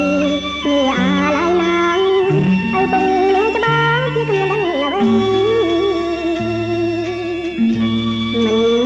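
The whole clip has a wrong sample rate: it runs 1.38 times fast and 5.55 semitones sharp, which fits 16 kHz audio played at 22 kHz.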